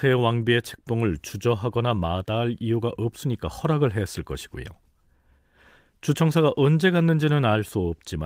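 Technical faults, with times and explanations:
No technical faults heard.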